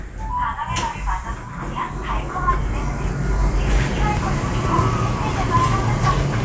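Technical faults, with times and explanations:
Nothing stood out as a technical fault on listening to this sound.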